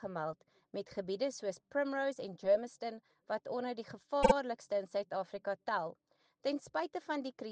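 At 4.22 to 4.33 s, repeated frames: a block of compressed audio about 52.2 ms long was written twice more than it should have been, which fits a pair of short codec frames, so the decoder replays that slice back to back. It is heard as a brief stutter, and the audio gains about 104.5 ms.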